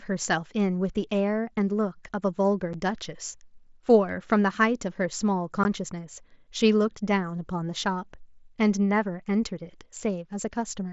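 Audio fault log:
2.73 s and 5.64 s, unconcealed Bluetooth headset packet loss: two short holes punch through the speech, about 7.5 ms at the first spot and about 15 ms at the second, which fits one lost headset packet and then two back to back. Nothing patched the gaps on the mSBC link, so the audio just drops to silence or an idle pattern and snaps back, giving those abrupt, hard-edged cuts rather than a smoothed-over blip.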